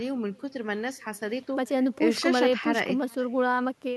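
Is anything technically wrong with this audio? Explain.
Yes. Echo with no canceller, throughout the speech: the far end plays the call over a loudspeaker, its microphone recaptures it, and nothing cancels it, so every phrase returns around 400 ms later as a faint, thin copy about 28 dB below the speech.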